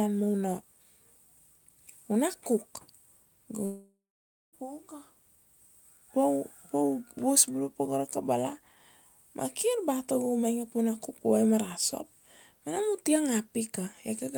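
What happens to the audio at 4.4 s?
A long network dropout runs from 3.65 to 4.55 s, and 4.4 s falls near its end. The sound points to about 0.88 s of audio likely never arriving. The receiver stretches the last sound into a fading buzz, then gives up, leaving roughly 0.57 s of silence. At 4.4 s that silence is what is heard. The speech resumes at 4.55 s with the lost stretch simply missing.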